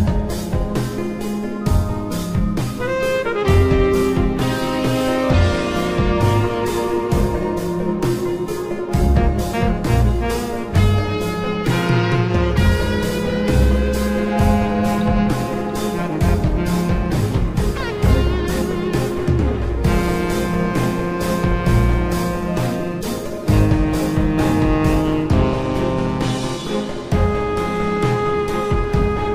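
No technical faults can be heard anywhere in the clip. The audio runs without any break, dropout or disturbance.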